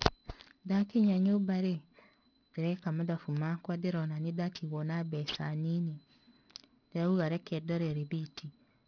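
It's a speech clip with aliasing running the whole way through. Everything above about 5.5 kHz has folded back down into the band instead of being filtered out, so the sibilants come across gritty and metallic, with unrelated tones only about 20 dB under the voice. The spectrum runs hard right up to that 5.5 kHz edge, which fits a downsample from 48 kHz to 11 kHz done without an anti-alias filter.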